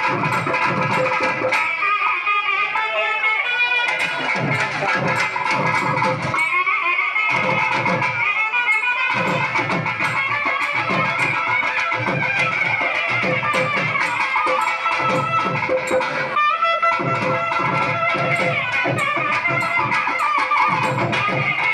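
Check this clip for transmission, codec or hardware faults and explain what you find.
No faults can be heard anywhere in the recording.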